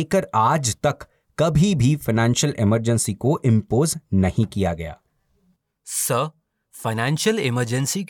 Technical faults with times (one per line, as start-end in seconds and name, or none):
none